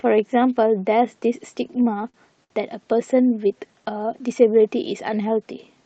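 From 1.67 to 2.52 s, the speech runs into repeated stalls, a stutter. Packets arrive late or too slowly, and the jitter buffer runs dry five times. Each time the receiver stretches the last sound to bridge the wait. The fills total about 147 ms, roughly a sixth of that stretch, and the longest lasts 63 ms. Nothing is lost. The speech drags and hiccups through the passage. The call codec limits the band to 8 kHz.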